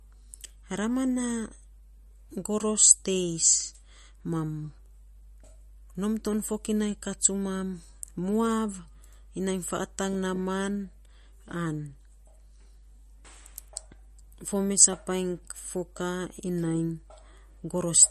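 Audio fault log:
Throughout: mains hum, a steady 50 Hz tone from power-line coupling, sitting about 25 dB below the speech, unlike broadband noise or rumble.
Throughout: MP3 compression likely, swirly watery speech with nothing above 13.1 kHz, consistent with a low bitrate around 41 kbps, rather than simple low-pass filtering.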